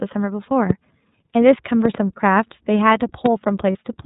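Throughout, the speech sounds band-limited and slightly rough and synthetic, with nothing above 4 kHz. This is plainly audible iLBC codec damage: a narrowband VoIP coder that codes each frame's excitation independently, and the result fits its 13.33 kbps, 30 ms frame mode.

From 0.70 to 0.73 s, a single sharp loud pop sits about 15 dB above the speech, which carries on underneath. The likely cause is a sudden voltage step or pulse, from a plug, switch, static or driver glitch, added to the signal and shaped by the circuitry after it.

From 1.11 to 1.14 s, the speech briefly turns into a held, slightly buzzy vowel and then recovers almost at once. These are lost iLBC frames: one 30 ms packet went missing, and the decoder filled the gap by repeating the last pitch cycle mixed with noise.

From 1.85 to 1.97 s, another loud pop comes as two sharp clicks in quick succession, again about 15 dB above the speech. 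It likely has the same kind of electrical transient behind it.

From 3.72 to 3.75 s, a second 30 ms lost frame produces the same brief buzzy, held concealment. The voice is right again almost at once after it, because each iLBC frame decodes on its own.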